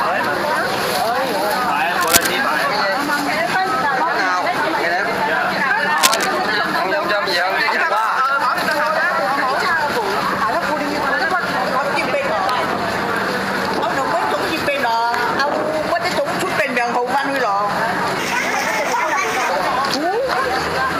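At 2.01 to 2.28 s and again at 5.98 to 6.39 s, a burst of cable scratch noise rasps across the sound, roughly as loud as the material itself. The likely cause is a worn lead, connector or control being moved so that its contact resistance flickers rapidly. It is a dense, uneven rustle lasting a quarter to nearly half a second, not a single sharp click or a steady hiss, and it comes and goes with the handling.

From 18.19 to 19.50 s, a section at the wrong speed runs 1.31 times too fast. It was likely played against a mismatched clock. Pitch jumps by around five semitones and everything in that stretch is hurried too. The change in timing is what separates this from a pitch-shift artefact, which would raise the pitch while keeping the original pace.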